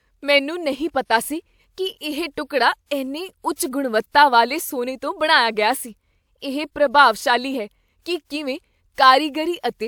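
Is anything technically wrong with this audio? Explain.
No, nothing technically wrong turns up anywhere in this speech recording.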